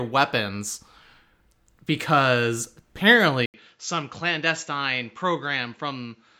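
Speech clip. At 3.46 s the sound drops out for 80 ms, then returns duller, a few dB quieter, cut above 7.6 kHz, with faint new background noise: likely an input switched to a poorer device rather than a filter change.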